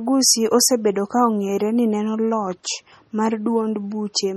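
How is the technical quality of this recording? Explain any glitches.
The recording has heavy coding damage running through the whole clip.

MP3 compression, throughout: The sound is likely MP3-encoded at a rate that fits about 32 kbps. Short of bits, the encoder dropped weak frequency lines that flicker between frames, leaving watery, swirling speech, smeared consonant onsets, and nothing above 18.9 kHz.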